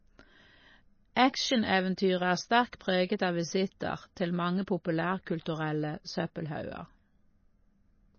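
MP3 compression runs through the whole speech clip: nothing survives above 6.6 kHz, and weak spectral detail flickers between frames, giving a watery, swirly texture with chirpy sibilants. A low-bitrate MP3 encode, plausibly around 24 kbps, is the likely cause.

Pre-echo appears at 1.15 s and again at 2.72 s, just before "preget av visitter til". The codec spread noise meant for a sharp onset across its whole block, so a brief hiss, about 19 ms and 12 ms long, leaks ahead of each softened attack.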